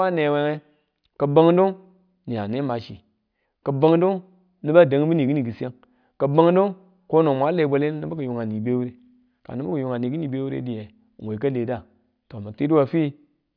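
Nothing in this speech recording stands out as a technical fault, so there's nothing to flag here.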